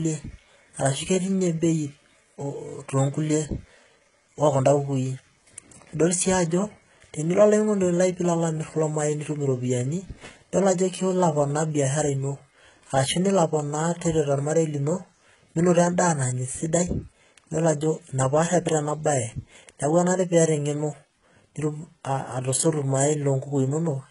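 Throughout the speech, sibilants sound gritty and lispy, with likely heavy HE-AAC compression at a very low bitrate near 12 kbps; a spectrogram shows smeared, copied-up treble ending sharply at 11.1 kHz.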